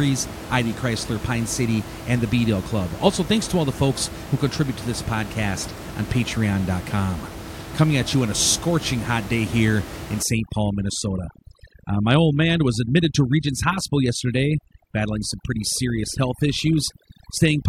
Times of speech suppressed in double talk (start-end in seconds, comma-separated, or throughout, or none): none